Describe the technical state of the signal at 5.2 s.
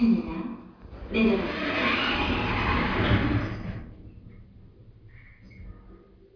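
At 5.2 s the signal is intact, with no audible dropout, distortion, glitch or other technical fault at that moment.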